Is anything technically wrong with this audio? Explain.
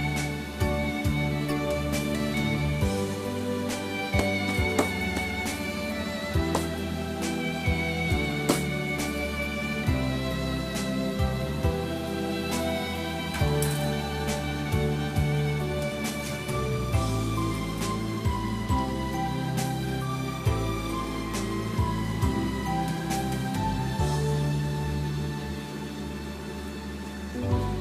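No, the signal shows no technical faults anywhere in the clip.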